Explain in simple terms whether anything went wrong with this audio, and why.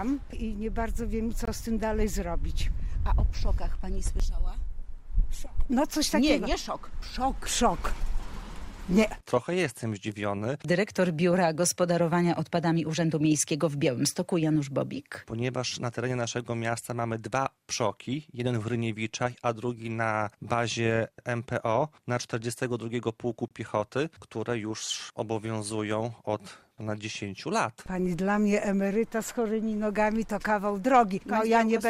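Two brief dropouts, at 1.45 s (about 22 ms) and 23.48 s (about 27 ms), are gaps between stream segments: the player stitched its chunks together slightly apart and filled the space with silence.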